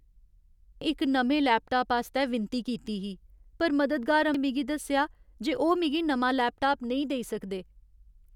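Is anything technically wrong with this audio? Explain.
Yes. The speech has compressed frames skipped at two points, 0.82 s and 4.34 s, the second just before "मिगी दस्सेआ जे ओह्". At each, roughly 300 ms of audio is missing, which fits about three 92.9 ms frames that were either absent or rejected by the decoder as damaged. Playback jumps forward by that amount.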